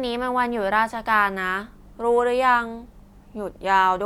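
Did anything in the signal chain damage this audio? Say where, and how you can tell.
No, nothing in this chain audibly damaged the speech. None of the stages from capture through to playback leaves a mark that can be heard here.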